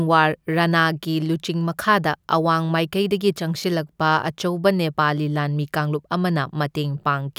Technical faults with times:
3.60-3.64 chunks out of order

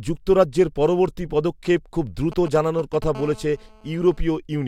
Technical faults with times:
2.32-3.04 GSM signalling bursts
3.15-4.21 GSM phone buzz

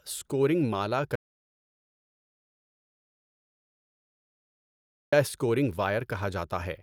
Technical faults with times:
1.15-5.12 audio dropout to silence

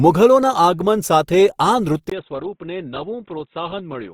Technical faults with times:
0.00-4.13 Opus compression
2.10-4.13 input switched to a poorer device

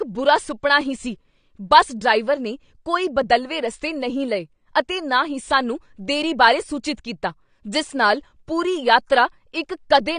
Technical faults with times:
0.00-10.19 AAC compression

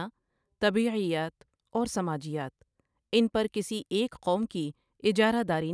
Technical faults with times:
none

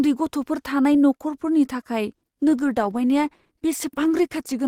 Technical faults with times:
2.08-4.68 adaptive stream at a lower bitrate

